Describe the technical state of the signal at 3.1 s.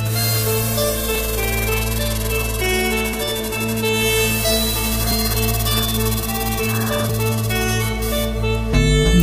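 At 3.14 s the signal skips forward by around 20 ms with no silence in between, which points to audio missing between chunks, likely from 2-second processing blocks dropping a sliver at each handover. The waveform shows a sudden discontinuity at the join, and the spectrogram shows a thin vertical seam.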